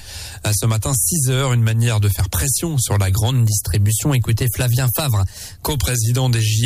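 From 3.31 to 5.77 s, sound plays 6.4% fast and 108 cents sharp, then snaps back. Clean steps, unlike wow's wavering, mark a likely drift correction step.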